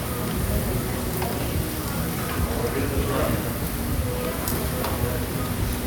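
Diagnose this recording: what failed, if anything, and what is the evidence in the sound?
Nothing failed at any stage of this recording, and the sound itself carries no evidence of a fault.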